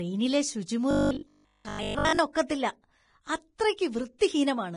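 Throughout the speech, heavy Vorbis compression damage is audible, likely from encoding at a low bitrate, around 30 kbps judging by the sound. The encoder has lowered the cut-off, so a spectrogram shows a hard ceiling in the treble. Below it, the treble detail has been quantised so coarsely that it turns into hissy, grainy noise. Consonants sound rough and attacks are blurred. On the spectrogram, the upper bands look blotchy and speckled instead of carrying clean harmonic structure.

From 0.91 to 2.19 s the voice turns into a rigid, metallic drone. This is robotic sound from repeated short buffers, likely caused by audio arriving too slowly for playback. While the real signal is skipped, a short stretch is replayed over and over, and the 50 Hz buzz fits a 20 ms buffer. Roughly seven tenths of that span is repeated material. In the waveform it looks like an identical 20 ms shape stamped again and again. 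On the spectrogram it appears as flat, evenly spaced harmonics at multiples of 50 Hz.

At 4.18 to 4.21 s a sharp attack is preceded by a brief hiss, which is pre-echo. The attack falls late in a transform block, and the quantisation noise sized for the loud onset spreads across the quiet 25 ms before it. The onset sounds softened and smeared. In the waveform, a faint fuzzy band of noise appears just ahead of the transient's rise. On the spectrogram, a thin broadband smudge appears just before the attack's vertical edge.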